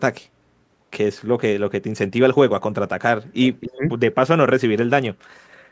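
It's a short speech clip, and from 3.43 to 3.76 s you can hear an echo leak: a faint copy of the talker trailing about 275 ms behind, sitting well below the main speech, around 15 dB down. That's most likely a loudspeaker on the far end whose echo canceller let some of the pickup slip back into the call. Right after, from 3.76 to 3.84 s, the speech is suppressed in double talk, ducking briefly by something like 15 dB, which is likely the same canceller clamping down when it can't tell the talker from the returning echo.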